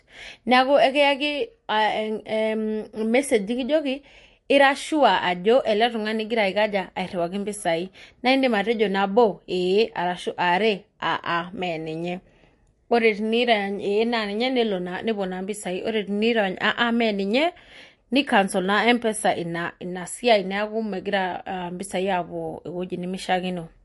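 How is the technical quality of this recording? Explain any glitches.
Quality is clearly degraded for the whole clip by MP3 compression. The likely cause is an encoder short of bits, consistent with about 48 kbps: it removes everything above 11.3 kHz and drops weak frequency lines frame to frame, leaving the speech dull, watery and swirly.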